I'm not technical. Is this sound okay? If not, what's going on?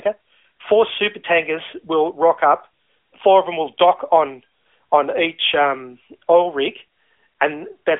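Yes, no faults found; this is ordinary speech carried over a mobile phone line with the AMR narrowband mobile codec, so the slightly muffled, telephone-like quality is simply how a normal call sounds.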